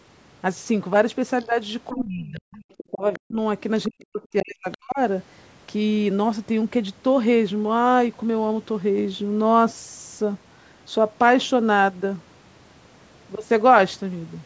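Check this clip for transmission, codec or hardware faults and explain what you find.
Two echo-canceller faults appear in the first five seconds of the speech, both during a stretch where the far end is audible.

Other side's voice leaking through, at 1.4–1.95 s, 2.52–3.19 s, 4.0–4.05 s and 4.72–4.78 s: a faint second voice, about 25 dB below the talker (about 35 dB at 4.0 s), most likely loudspeaker playback the canceller failed to subtract. Unlike crosstalk, it arrives as scraps timed with the far end.

Speech suppressed in double talk, from 1.93 to 4.98 s: the talker's level plunges, at worst by about 40 dB, across roughly two seconds in total. The likely cause is the canceller treating overlapping speech as echo and attenuating everything. Its tie to far-end activity separates it from ordinary dropouts.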